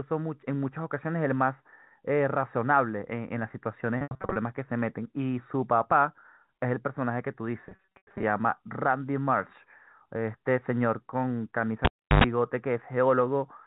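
From 3.98 to 4.36 s, and again from 7.67 to 8.23 s, the speech turns briefly held and buzzy in stutters. This is packet loss with pitch repetition: about 260 ms and then 360 ms of audio went missing in scattered gaps, the longest 80 ms and 100 ms, and the receiver looped the last pitch period to bridge each one. Between 11.85 and 12.24 s a pop drops into near silence, a burst of 50 Hz mains buzz lasting roughly 0.1 s follows, and a second pop brings the sound back. That is a cable pulled and plugged in: the line was dead for about 0.34 s and hummed while only the plug tip made contact. Throughout, the band stops at 4 kHz, as expected from G.711 telephone coding.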